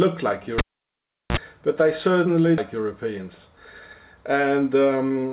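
Audio carried over a call path whose band stops at 4 kHz, which fits G.711 mu-law coding. At 0.58 to 1.37 s a cable is pulled and plugged in. A pop is followed by about 0.74 s of near silence, then a 45 ms burst of 60 Hz mains buzz and a second pop. The buzz and pops mark it as a cable fault rather than a network dropout. At 2.58 to 2.60 s there is a skip ahead: roughly a second of audio is missing, and the two sides join with no silent gap. The missing stretch points to the jitter buffer discarding audio to catch up. Jitter buffer speed-up follows at 2.78 to 3.20 s, running about 7% fast, and again at 4.4 to 5.32 s, about 12% fast. Pitch stays the same throughout, which separates this from resampling.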